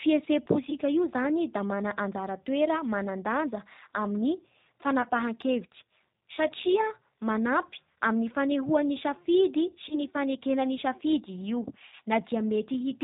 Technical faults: G.729 codec; VoIP packet loss concealed by the speech codec

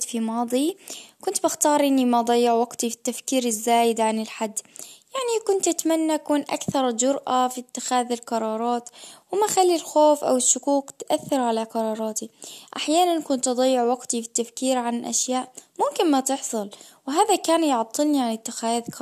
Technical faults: none

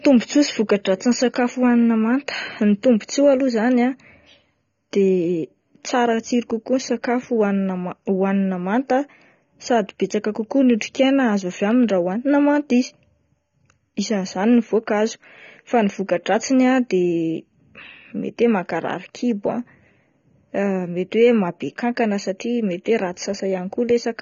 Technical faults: AAC compression

